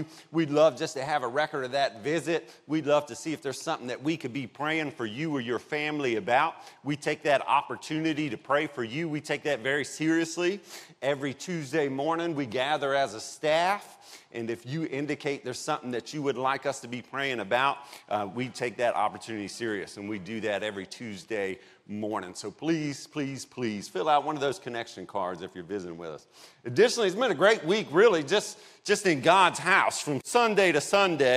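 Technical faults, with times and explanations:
No technical faults can be heard anywhere in the clip. Nothing in the audio calls for a time or an explanation.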